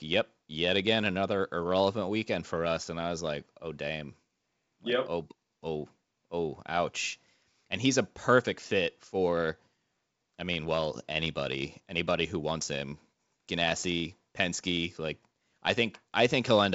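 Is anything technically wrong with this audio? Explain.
No, this is speech through G.722 wideband telephone coding at 64 kbit/s, with the expected 7 kHz ceiling and nothing that calls for correction.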